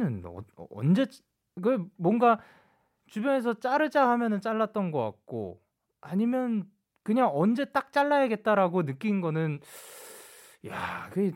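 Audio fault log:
No faults can be heard anywhere in this speech.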